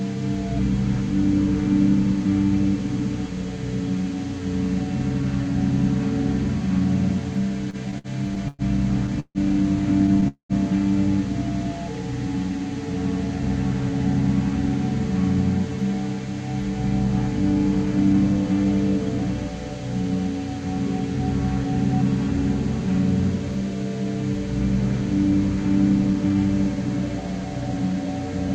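From 7.70 to 10.25 s the audio shows repeated stalls (stutter). Packets were arriving late or too slowly, and the jitter buffer kept running empty. There are 11 short gaps, the longest 150 ms, about 417 ms in all. Each one is filled by stretching the last sound. Nothing is lost, but the sound drags and catches. About 16% of that span is concealed fill.

At 10.28 s comes a call audio freeze lasting about 0.25 s. The last sound is held as a brief buzz or hiss, then fades to silence for about 100 ms. The likely cause is packets held up in transit until the buffer emptied. When they arrive, the audio resumes where it stopped. The inserted 216 ms leaves everything after it that much later.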